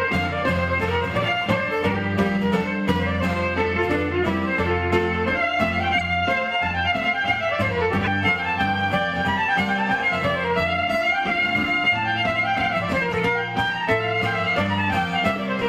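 You'll hear four quick glitches from a corrupt frame decoded, at 5.98, 8.03, 13.12 and 15.33 s, each lasting a few frames (25 to 40 ms). Flipped bits got played anyway, scattering energy to the wrong frequencies. The first two hit hardest, and the last is quieter.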